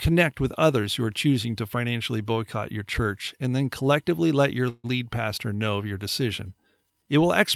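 At 4.69 s, after "then collectively let your", a call audio freeze runs to 4.86 s. The last sound is stretched into a fading buzz or hiss that fills about 144 ms, ending in about 30 ms of silence, likely from delayed packets draining the jitter buffer. Speech resumes at "lead pastor know of" with nothing lost, only delayed.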